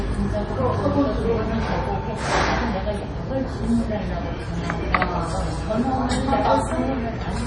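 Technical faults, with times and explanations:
Throughout, MP3 compression: nothing is heard above 10.5 kHz, and the sound has a heavy watery, swirling quality, with weak frequency components flickering on and off from frame to frame and transients smeared. This is likely an MP3 encoder starved of bits, pointing to a low bitrate around 32 kbps. A simple low-pass filter would cut the treble just as cleanly but would leave the remaining band steady, without this churning.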